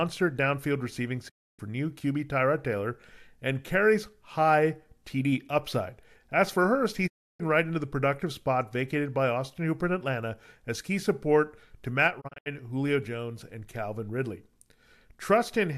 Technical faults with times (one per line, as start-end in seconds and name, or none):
1.28-1.61 digital broadcast dropout
7.06-7.41 digital broadcast dropout
12.20-12.48 digital broadcast dropout